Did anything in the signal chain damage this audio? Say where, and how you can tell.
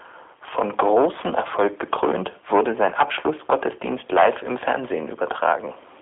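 Yes, at the codec stage: G.729 coding runs through the whole clip. The speech has a rough, synthetic edge, with a telephone band of roughly 300 Hz to 3.5 kHz and nothing above 3.7 kHz. That fits an 8 kbit/s G.729A encoder rebuilding each frame from a vocal tract filter, pitch prediction and sparse pulses.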